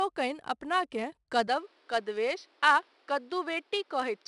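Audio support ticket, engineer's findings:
4-bit ADPCM compression, whole clip: gritty hiss riding on every loud bit of speech, roughness on attacks, nothing above 10.7 kHz. Step-size adaptation lagging the signal; grit level fits something near 89 kbps. Plainly audible.

From 1.48 s to the end, speech suddenly goes dull, top cut off at 6 kHz, with a new noise floor roughly 35 dB down. No gap, no level jump. Likely input switched to a poorer device, narrower band and its own hiss.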